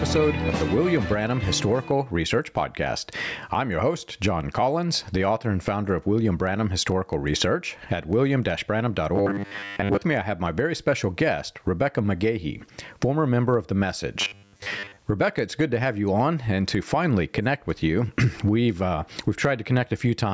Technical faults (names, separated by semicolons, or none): gain pumping; robotic sound from repeated short buffers